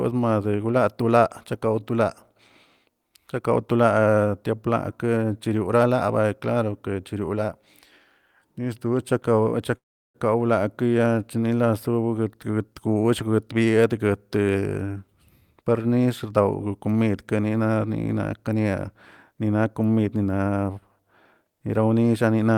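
At 9.77 s the speech stops for about 0.39 s, which sounds like a call audio freeze. A brief fading fill gives way to silence of about 0.36 s. Likely cause: packets were delayed and the jitter buffer ran dry. The speech then resumes where it stopped, with nothing lost.

From 15.91 s to 16.33 s a jitter buffer speed-up follows. The receiver trims small pitch-period slices to shrink a backlog of buffered audio. Roughly 40 ms is removed. Speech plays at 108% speed, hurried, with pitch unchanged.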